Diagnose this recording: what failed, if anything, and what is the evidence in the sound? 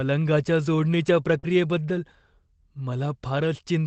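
Short concealed packet loss at the network stage, from 1.39 to 1.45 s. About 40 ms of audio never arrived in time. The receiver extended the preceding sound for 35 ms, then crossfaded back, which is heard as a brief smear.

Lost packet rebuilt from error correction, also a network-stage fault, at 1.43 to 1.45 s. The last 20 ms of the gap was one packet, recovered from the low-bitrate redundant copy carried in the next Opus packet. That frame sounds rougher and noisier. On a spectrogram it is a grainier, less defined 20 ms slice.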